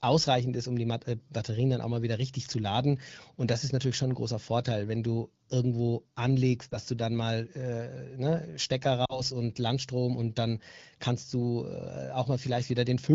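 At 6.69 s the speech gives a brief warble lasting about 20 ms, and from 9.05 to 9.21 s a slightly longer smear covering about 40 ms. These are lost AMR speech frames, one and then two. Each failed its checksum, so the decoder repeated the last good pitch and vocal tract settings at falling gain. The sound stretches and dims, then returns briefly weak through clear AMR wideband coding consistent with about 12.65 kbit/s.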